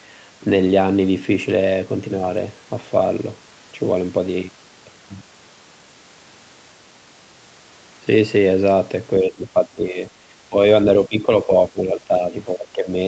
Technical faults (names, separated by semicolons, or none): speech suppressed in double talk